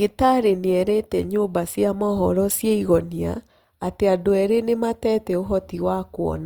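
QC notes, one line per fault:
Throughout: Opus compression. The speech carries a plainly audible rough, grainy texture, with its tones turning noisy, yet the spectrum stays full up to about 20.2 kHz with little swirling and few hollow gaps. This is likely an Opus encode in its fullband music mode, where each band's energy is kept and starved bands are filled with folded or noise content rather than left empty. The degree of grain fits a stream of around 24 kbps.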